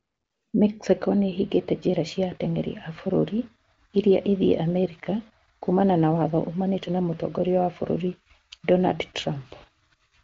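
No technical faults can be heard in this recording.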